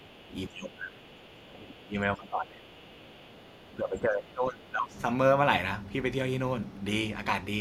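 Right from the start, 0.0 to 0.33 s and again from 0.49 to 4.96 s, the speech ducks by around 10 dB at first, then up to about 15 dB. That's likely speech suppressed in double talk: the echo canceller couldn't tell the talker from loudspeaker echo and pulled both down. Inside that stretch, at 3.05 to 3.41 s and 4.63 to 4.68 s, faint scraps of the other side's voice leak through, sitting about 30 dB under the speech, likely residual echo the canceller didn't fully remove.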